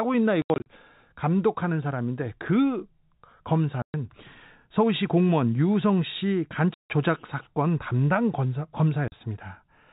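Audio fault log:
0.42 to 0.66 s, 3.82 to 3.94 s, 6.74 to 6.90 s, 9.08 to 9.12 s: packet loss filled with silence. The speech drops to dead silence with hard edges, losing about 160, 120, 160 and 40 ms. The first loss is broken into pieces, the longest 80 ms. Every gap is a multiple of 20 ms, which fits 20 ms packets. Concealment would fill the gaps with repeated or smeared sound, but here there is nothing, and the narrow telephone band stays steady around the gaps.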